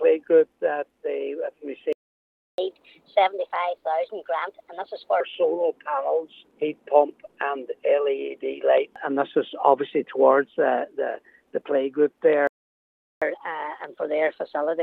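The audio has two playback stalls, each followed by catch-up at higher speed. At 1.93 s the sound cuts out mid-flow and stays silent until 2.58 s, a gap of 0.66 s. A second stall runs from 12.47 s to 13.22 s, lasting 0.74 s. Both are likely cases of the player running short of data, or its playback thread being held up, so nothing reached the output. From 2.58 s to 5.20 s the audio then runs at 1.25 times normal speed, and the pitch rises by about four semitones. The player is resampling its backlog to win back the lost time. At 5.20 s speed and pitch drop back to normal. After the second stall the same thing happens more gently. From 13.22 s to the end, playback runs at 1.15 times speed, about two semitones sharp, and it is still catching up when the clip finishes.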